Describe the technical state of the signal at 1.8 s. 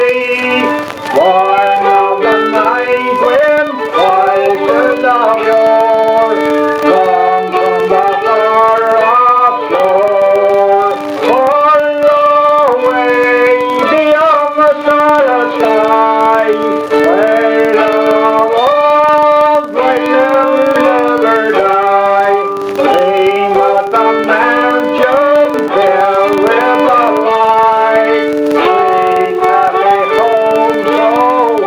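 At 1.8 s the filter restarted on every block fault is present, as it is for the whole clip. A filter drops its state at each block boundary and begins again from silence, leaving a small transient every time. This produces a steady buzz at about 21.5 Hz that rises and falls with the signal level, which fits a 2048-sample block.

Gain pumping is also present at 1.8 s and throughout. The level swings by around 15 dB, pulled down on loud sounds and rising again between them, which squashes loud and soft parts closer together. The likely cause is gain set far too high for the microphone, with a fast limiter or compressor reining it in.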